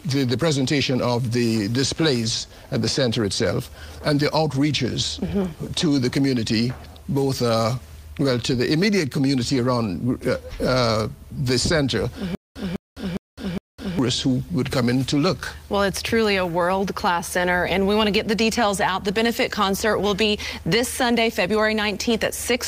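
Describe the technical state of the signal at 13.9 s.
Stutter with silent gaps is present at 13.9 s, in the last cycle of a fault running from 12.35 to 13.99 s. The same burst of about 203 ms repeats four times, each followed by about 207 ms of digital silence, giving a steady 409 ms rhythm. This is likely a stalled player or stream that replays its last buffered fragment at each retry and then runs dry, so the audio belonging to that span never plays.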